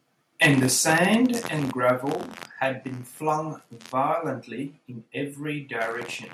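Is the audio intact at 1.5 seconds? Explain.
No. At 1.47 s the speech and background drop together by about 5 dB, likely a microphone volume stepped down by the call software. The waveform envelope shrinks abruptly, and the spectrogram dims evenly across frequencies.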